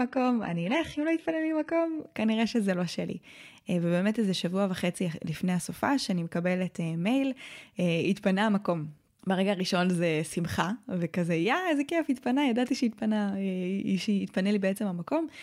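From 0 to 2.0 s the speech is thin, with stronger codec artefacts and nothing above 11.8 kHz, which fits a 16 kbit/s HE-AAC stream: an adaptive stream starting at a low bitrate. At 2.0 s it jumps to clearer, 96 kbit/s AAC-LC-like quality with no gap, unlike a rebuffering stall.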